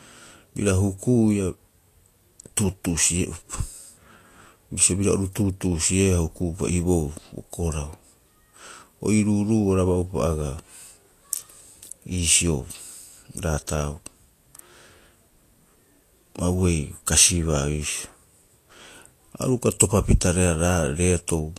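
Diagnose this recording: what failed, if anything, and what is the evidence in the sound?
Codec stage: the speech is hissy and grainy throughout, with nothing above 14.2 kHz, which fits likely Vorbis compression at around 36 kbps coarsely quantising the treble.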